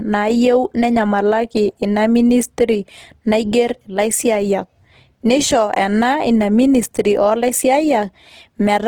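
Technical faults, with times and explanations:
Throughout, Opus compression: the speech sounds grainy and rough, with noisy fill where detail should be, yet the full band up to 20.1 kHz stays present. That's likely Opus in music mode, starved of bits at a rate that fits around 16 kbps.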